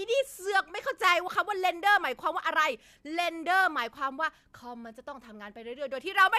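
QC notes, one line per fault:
No technical faults are audible anywhere in the speech recording; level, continuity and frequency content stay steady and intact throughout.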